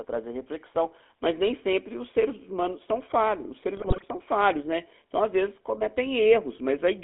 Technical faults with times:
0.00-7.03 GSM full-rate codec
3.75-4.04 GSM bit errors

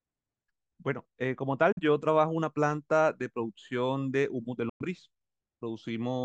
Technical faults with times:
1.72-1.79 Bluetooth dropout
4.69-4.86 Bluetooth dropout

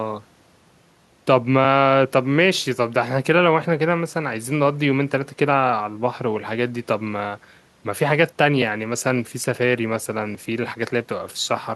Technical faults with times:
none

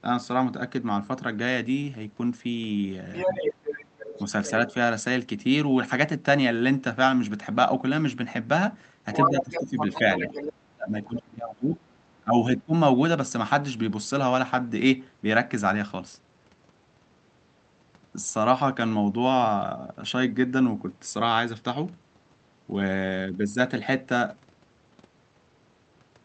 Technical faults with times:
3.13-4.51 other side's voice leaking through
9.13-10.53 other side's voice leaking through
9.28-11.86 speech suppressed in double talk
11.03-11.22 other side's voice leaking through
12.21-12.73 speech suppressed in double talk

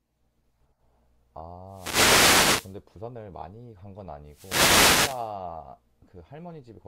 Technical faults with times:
1.67-2.80 wireless microphone noise hit
4.26-5.35 wireless microphone noise hit

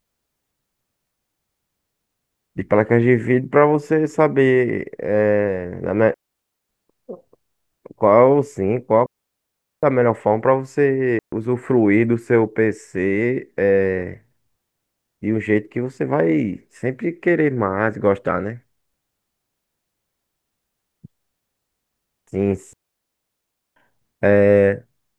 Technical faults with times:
6.14-6.69 digital wireless dropout
9.06-9.83 digital wireless dropout
11.19-11.32 digital wireless dropout
22.73-23.76 digital wireless dropout

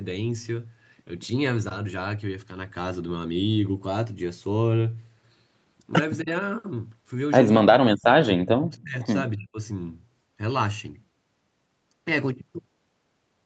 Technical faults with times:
6.22-6.29 speech suppressed in double talk
7.64-8.96 speech suppressed in double talk
9.37-9.58 speech suppressed in double talk

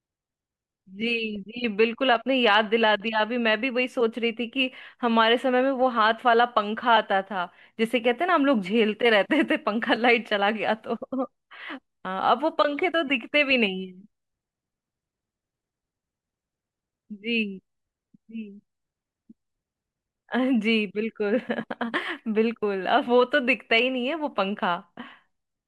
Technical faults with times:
13.50-13.53 DAB burbling

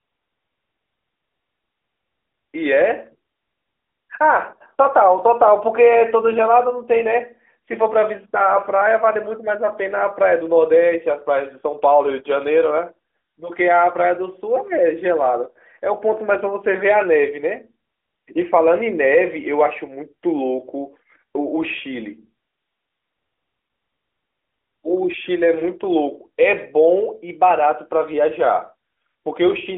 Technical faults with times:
none

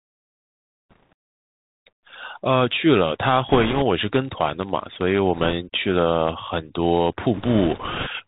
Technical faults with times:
0.00-8.27 Bluetooth CVSD headset codec
0.90-1.13 bit errors on a Bluetooth voice link
3.49-3.83 bit errors on a Bluetooth voice link
3.99-5.20 filter restarted on every block
5.35-5.53 bit errors on a Bluetooth voice link
7.34-8.08 bit errors on a Bluetooth voice link

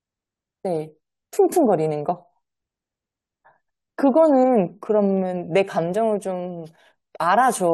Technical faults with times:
none

